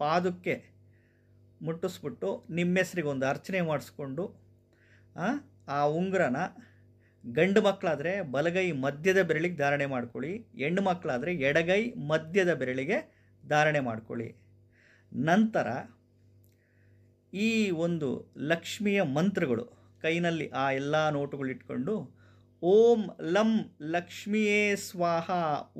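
Nothing goes wrong anywhere in the audio; there's simply nothing here to flag.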